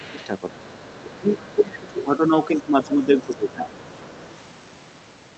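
A speech recording in which the echo canceller has likely failed in two related ways. First, the other side's voice is leaking through: the far-end audio played from the loudspeaker was not fully removed from the microphone signal, so a faint second voice sits under the talker at 0.0 to 0.27 s, 0.59 to 2.03 s, 2.57 to 2.85 s, 3.31 to 3.36 s and 3.82 to 4.27 s. It is roughly 20 to 30 dB below the main speech, so it reads as a quiet background talker rather than a clear second voice. Second, the speech is suppressed in double talk: when both sides spoke together, the canceller could not separate the local talker from the echo and turned everything down. The talker's level dips by roughly 10 dB at 0.06 to 0.2 s, by up to about 20 dB across 0.51 to 2.0 s, and by about 15 dB at 2.66 to 3.78 s, so the voice thins and ducks in pieces over those stretches. The audio is band-limited to about 8 kHz, which fits a wideband call codec such as Opus.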